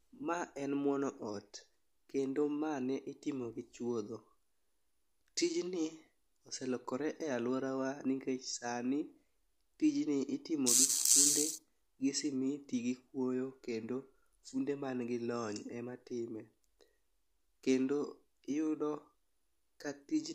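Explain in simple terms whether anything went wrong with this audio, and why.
Nothing went wrong here: the speech recording shows no audible technical fault at any point.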